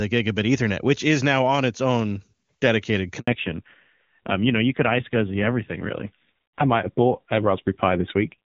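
At 3.19 s, just after "on its own dedicated", the call was handed from one network to another, and no speech frames arrived during the switch. This handover gap leaves the voice dying away abruptly into 80 ms of silence, until 3.27 s, and whatever was said there is lost.

When the new link starts at 3.27 s, the call falls back to narrowband, dropping from HD Voice, which until then sounds clear with a crisp top end fitting AMR-WB at a high rate. From there to the end, nothing above 4 kHz remains, and the voice turns dull and rough, which fits a low-rate AMR-NB mode around 5.9 kbit/s.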